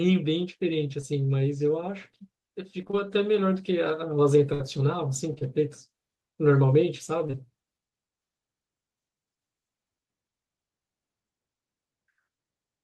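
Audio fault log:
1.01–1.14 s, short concealed packet loss: about 20 ms of audio never arrived. The decoder extended the preceding sound for roughly 12 ms and blended back, stretching timing by a few milliseconds. It is a single brief smear, unlike the choppy run at 2.8 s.
2.81–2.95 s, repeated packet loss (robotic sound): four gaps, none longer than 20 ms, about 80 ms lost in total, with around 41% of the span patched by extrapolation. The gaps follow each other too closely to recover, giving a choppy, stuttering texture rather than one isolated tick.
4.54–4.61 s, burst of packet loss: a single unbroken gap of about 60 ms, concealed for roughly 58 ms by holding the last sound while fading it down. It is heard as a sustained buzz or fading hiss, and the audio resumes with that stretch missing. That one continuous hole separates it from the repeated loss, which breaks up into several short ones.
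5.34–5.43 s, short concealed packet loss: two back-to-back losses of about 20 ms each, patched for roughly 33 ms and 21 ms. Each is a brief blend, not a faded hold, so it reads as a quick wobble rather than a burst.
7.27–7.35 s, short concealed packet loss: two adjacent losses of about 20 ms each, filled for roughly 19 ms and 22 ms. The result is a short smear, with a brief sound possibly swallowed.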